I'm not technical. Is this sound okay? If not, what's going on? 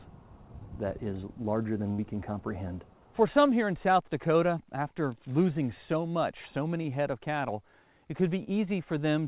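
No. At 1.92 to 2.00 s there is a burst of packet loss: a chunk of the call was lost or arrived too late, so the receiver stretched the last sound into a fading hold for about 60 ms before the audio picked up again further on.

Two short concealed packet losses follow, at 6.82 s and 8.44 s. Each time a few hundredths of a second went missing and were patched over, which is heard as a quick smear or wobble.

Throughout, the call path carries nothing above 4 kHz, so the sound has the narrow, telephone-like quality of an ordinary phone line.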